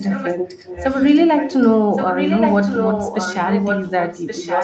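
Echo leak runs through 0–0.35 s, 0.56–1.7 s and 1.94 s to the end: a copy of the speech trailing about 1.1 s behind, quiet in the middle stretch and nearly as loud as the speech at the end. This is likely a loudspeaker echo the far end's canceller failed to remove.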